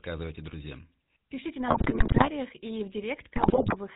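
From start to finish the speech has the buzzy, gravelly edge of the GSM full-rate codec, with nothing above 4 kHz. The damage is plainly audible, and it fits a 13 kbps full-rate stream: the vocal tract gets modelled and driven by sparse, regularly spaced pulses.

From 1.68 to 2.30 s, right before "и в", GSM bit errors break the voice into squawks, pops and gargling. Corrupted filter, pitch and gain values warp the spectrum and spike the level frame by frame. It happens again from 3.36 to 3.76 s, just after "и в", which sounds like roughly 5% of bits flipped.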